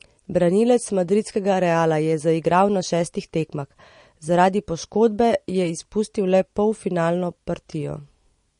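From start to finish the speech sounds watery and swirly, with chirpy, metallic s sounds and nothing above 10.6 kHz. This is likely MP3 compression at a low bitrate, near 40 kbps, cutting the treble and letting weak frequency lines flicker between frames.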